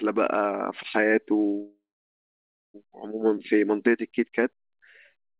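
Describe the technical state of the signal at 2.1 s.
A call audio freeze runs from 1.62 to 2.76 s, likely from delayed packets draining the jitter buffer. At 2.1 s, the brief fading fill has given way to about 0.93 s of silence. The sound then resumes where it stopped, with nothing missing.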